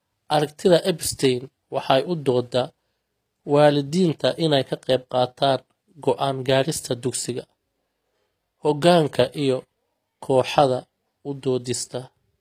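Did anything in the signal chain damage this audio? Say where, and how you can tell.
Yes. Across the whole speech recording the high end has a synthetic, gritty quality, with sibilants sounding metallic and lispy. This points to the codec stage, likely HE-AAC compression at a low bitrate around 24 kbps. The treble is rebuilt by copying lower bands upward, so its harmonics don't line up with the true ones. On a spectrogram the upper band would look like repeated blocks of the lower spectrum, cutting off completely at 14.9 kHz.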